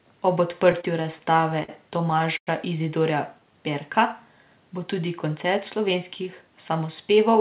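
From 0.72 to 1.70 s the speech drags and stutters. Eight brief holds of up to 51 ms stretch the last sound, totalling about 129 ms, roughly 13% of that stretch. These are repeated stalls (stutter): late packets kept emptying the jitter buffer, and the receiver bridged each gap without losing anything.

At 2.37 s the sound stops for about 100 ms, 80 ms of it silent, then resumes at 2.49 s exactly where it left off, now running about 101 ms later. This is a call audio freeze, likely from packets held up in transit, so the receiver filled the wait and then continued.

From 5.58 to 6.51 s the speech sounds hurried while the pitch stays the same, running at about 106% speed. This is a jitter buffer speed-up: the buffer had built up extra delay, so the receiver trimmed short pitch-period slices, around 70 ms in total, to catch up.

Throughout, nothing is heard above 4 kHz, which fits narrowband G.711 mu-law call audio.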